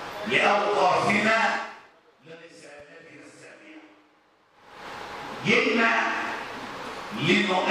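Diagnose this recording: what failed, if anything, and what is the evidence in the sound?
A single loud pop sits on top of the sound from 2.80 to 2.82 s, peaking roughly 10 dB above the surrounding level, while the audio carries on unbroken underneath it. The likely stage is the analogue wiring, where a sudden voltage step from a plug being seated, a switch or a static discharge would enter the signal path. The following circuitry would then shape that step into the brief, sharp transient heard here.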